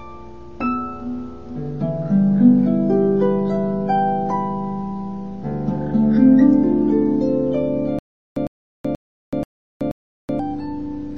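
From 7.99 s to 10.39 s the audio breaks into a stutter with silent gaps. A burst of about 105 ms repeats five times at an even pace, once every 481 ms, with about 377 ms of silence after each. The likely cause is a stalled player or stream replaying its last fragment at each retry before running dry. Plain dropouts only remove audio, but here the identical fragment keeps returning while new audio is lost.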